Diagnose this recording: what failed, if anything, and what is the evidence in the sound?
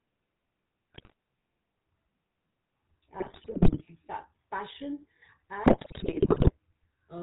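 Codec stage: the whole recording carries the sound of the GSM full-rate codec. The speech has a steady buzzy, gravelly roughness and no content above 4 kHz, which fits the 13 kbps full-rate coder. That coder describes the vocal tract with a short filter and drives it with a coarse, regularly spaced pulse excitation built from only every third sample. Detail that the pulses cannot represent comes back as grit and a hard upper band edge, and the damage is plainly audible throughout.

Network or radio link stage: GSM bit errors show up in three bursts, at 0.94 to 1.13 s, 3.20 to 3.82 s and 5.64 to 6.52 s. In each one the speech breaks into squawks, pops and gargling, and the last burst is the longest and most broken up. Corrupted bits reached the decoder and damaged the filter, pitch and gain parameters, so individual frames were rebuilt with a warped spectrum or a level spike. The density of the damage points to bit error rates of roughly 5 to 9 percent.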